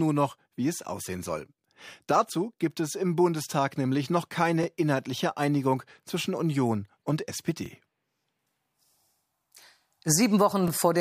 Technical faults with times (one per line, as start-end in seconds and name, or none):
4.63-4.66 overlapping chunks
7.66-7.68 overlapping chunks
10.68-10.70 overlapping chunks